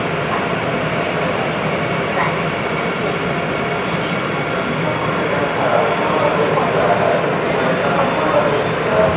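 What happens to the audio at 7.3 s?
Nothing goes wrong at 7.3 s: the audio carries straight through with no dropout, glitch or distortion, only the call path's usual narrowband character with nothing above about 4 kHz.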